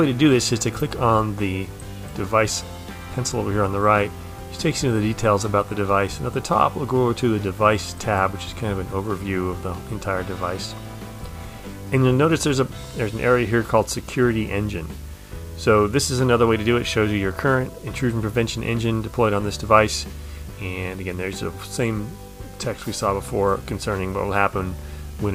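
A steady 50 Hz buzz with a fizzy hash above it runs through the whole clip, well beneath the main sound, joined by a whine at 15.6 kHz. This is video or display buzz: a screen or video cable is coupling its field and line rates into the audio.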